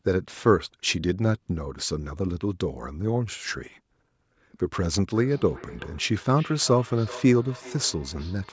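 A speech recording whose last stretch, from 5.14 s to the end at about 8.52 s, carries feedback echo between two devices. A second device in the room replays the far side's audio, and that microphone sends it back, so each sound returns roughly every 0.4 s, peaking at about 18 dB below the speech. On a spectrogram this shows as faint copies of each syllable's pattern trailing at that fixed spacing, within a band that stops at 8 kHz from the call's microphone processing. The waveform shows small echo bursts filling the gaps.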